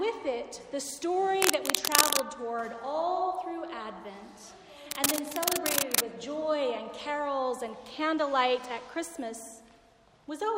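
Cable scratch noise sits over the sound from 1.42 to 2.25 s and from 4.91 to 6.01 s. The first burst is roughly louder than the signal, the second about level with it. A worn cable or connector being moved is the likely cause.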